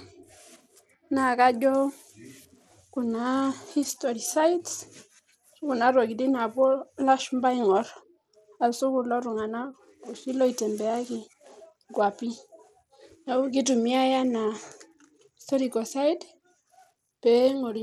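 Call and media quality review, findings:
Bluetooth SBC compression, throughout. Treble thin and flickering on speech, gritty noise and aliasing riding on the sound. Likely a Bluetooth link using SBC at a small bit pool, which fits roughly 96 kbps. Upper sub-bands starved of bits, the rest coarsely quantised.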